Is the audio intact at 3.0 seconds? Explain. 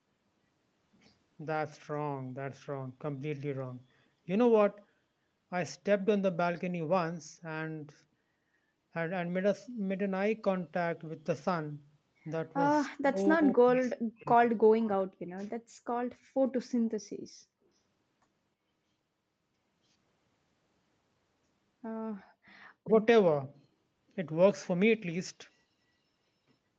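Yes, at 3.0 seconds the speech is intact, with no dropout, glitch or other fault at that moment.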